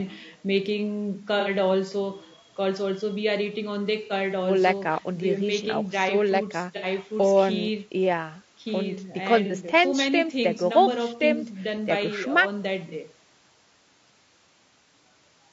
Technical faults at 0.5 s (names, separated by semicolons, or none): low-delay AAC compression